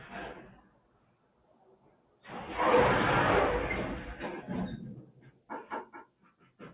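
A noise suppressor applied to sounds runs through the whole clip. It was built for speech, so it treats steady tones and ambience as noise. It keeps turning them down. The level swings by around 20 dB as the suppression engages and lets go. Onsets slip through, but anything held sinks. The result pumps and flutters, and the sound feels thin.

Sound cut by the noise suppressor is clearest in three places. From 0.61 to 2.24 s, steady material drops by about 12 dB. From 5.01 to 5.5 s, it dips again by about 12 dB. From 5.85 s to the end, the sound falls by about 12 dB once more. In each stretch the suppressor mistook sustained or fading sound for noise. Decays are clipped short, and the sound ducks instead of ringing out. The band also stops near 4 kHz, which fits a G.711 A-law call path at 64 kbps.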